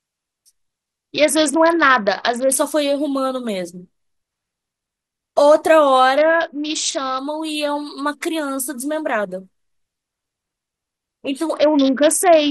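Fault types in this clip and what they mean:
Bluetooth SBC bit pool drop: three stretches of the speech, from 1.14, 6.17 and 11.54 s, turn dull and gritty, treble gone and coarse noise rising, which points to a congested link cutting the bit pool from 31 to 7, starving the upper sub-bands.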